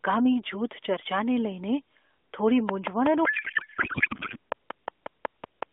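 From 2.69 s to 5.63 s a train of clicks runs over the speech: roughly fifteen near-identical pulses at a regular 5.45 per second, peaking about 10 dB above the signal and audible in pauses too. The likely cause is interference from nearby equipment.

Between 3.26 s and 4.37 s a codec payload misread replaces the speech with garbled noise and warble that barely tracks it. The receiver parsed octet-aligned AMR frames as bandwidth-efficient ones, so every field was read from the wrong bit positions until the framing matched again.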